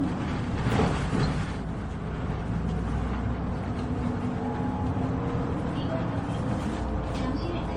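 Everyday sound clip with generation loss throughout: swirling, hollow smearing and blurred attacks, with nothing above 16.4 kHz. The damage is likely from about ten successive MP3 encodes at a low bitrate near 60 kbit/s, each pass adding fresh quantisation noise and spectral holes.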